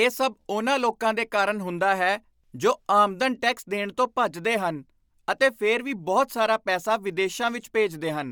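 Speech throughout, with plainly audible Bluetooth LC3 compression damage from start to finish, likely from an LE Audio link. The upper spectrum sounds grainy and noise-filled, which fits 10 ms transform frames at around 48 kbps, and nothing is present above 20.2 kHz.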